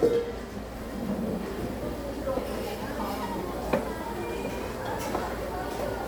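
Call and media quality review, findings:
No faults found: the sounds in the clip come through with a steady signal, no dropouts, clipping or timing disturbances anywhere in the recording.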